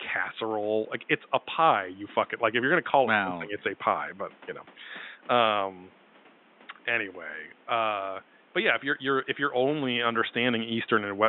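Nothing goes wrong with the system anywhere in this speech clip, and the only thing beneath it is a little background noise from the room, sitting about 30 dB below the speech, which belongs to the recording itself.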